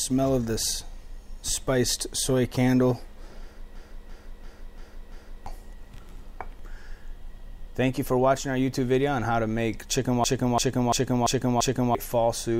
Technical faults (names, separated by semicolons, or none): system hang loop